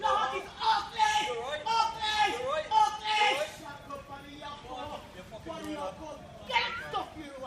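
From 4.82 to 5.32 s, an unreliable data bit flips randomly, adding equal spikes of about -52 dBFS, heard as a steady fine crackle or fizz.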